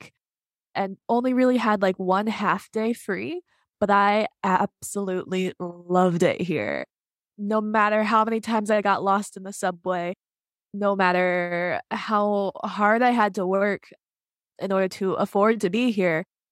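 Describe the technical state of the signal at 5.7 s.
At 5.7 s you're sitting in the middle of clock slip clicks, which run from about 0.11 s right through to 16.51 s. The likely cause is two devices on unsynced clocks, drifting apart by something like 500 ppm, so a single sample gets dropped or repeated roughly every 40 ms. That's around 25 ticks a second, fast enough to blur into a soft rattle riding on the speech.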